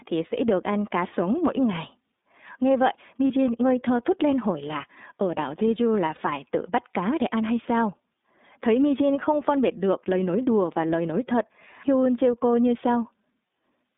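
Speech, passed through the iLBC codec for its whole length. The line is narrowband, roughly 200 Hz to 3.7 kHz, so nothing above that survives. The codec damage is plainly audible. The voice has a rough, slightly synthetic grain. Each frame's excitation is coded on its own, and the coarseness fits the 13.33 kbps mode with 30 ms frames. There are also two lost iLBC frames, at 3.27 to 3.30 s and at 6.15 to 6.19 s. Each gap is about 30 ms, one frame. The decoder fills it by repeating the last pitch cycle mixed with noise. The result is a brief held, buzzy vowel-like sound. The following frame does not depend on the lost one, so the speech comes back cleanly right after.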